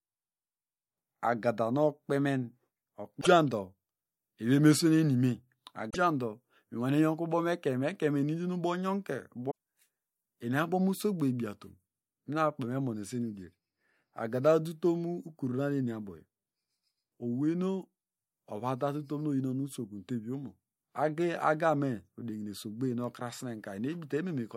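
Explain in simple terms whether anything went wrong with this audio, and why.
Three short glitches interrupt the speech, at 3.18 to 3.27 s, 5.87 to 5.96 s, and 9.47 to 9.52 s. Each is a brief blip. The cause is damaged data in a compressed stream. Part of the file was corrupted, so the player briefly misread it.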